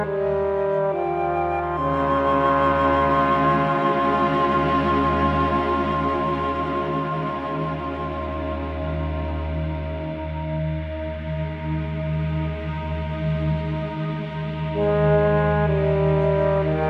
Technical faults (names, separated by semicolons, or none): none